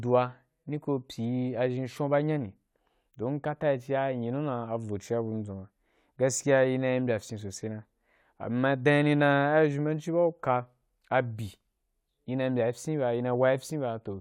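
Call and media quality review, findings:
Nothing stood out on listening to the speech.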